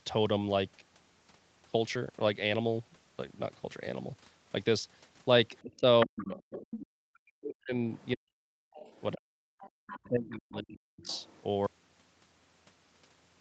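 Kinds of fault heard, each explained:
Other side's voice leaking through: A second voice surfaces in scraps, faint near 5.6 and 8.0 s and much clearer from 6.18 to 6.79 s and 9.59 to 10.07 s. This is likely loudspeaker echo that the call's echo canceller failed to remove.
Speech suppressed in double talk: The talker's level collapses, sometimes almost to nothing, in patches between 5.62 and 9.49 s and again from 10.05 to 11.13 s. This is likely the echo canceller turning everything down while both sides spoke at once.
Audio dropout to silence: From 11.67 s to the end, the sound stops dead into silence with no room tone left. This likely comes from the input signal being lost while the recording carried on writing silence.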